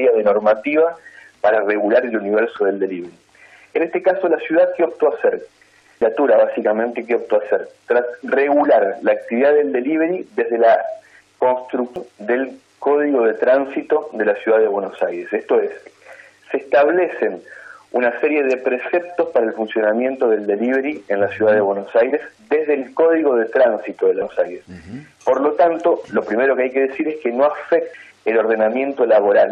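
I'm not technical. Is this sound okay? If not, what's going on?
No. This is damaged data in a compressed stream: parts of the stored audio file are corrupted, so the player briefly misreads them and has to find its place again. You hear short chirps or blips at 2.56–2.58, 6.02, 11.96, 24.22 and 27.94 seconds.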